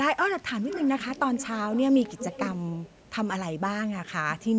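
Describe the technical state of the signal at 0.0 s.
At 0.0 s the speech is intact, with no fault present; it carries the ordinary character of call microphone processing, with the lowest bass trimmed and nothing above 8 kHz.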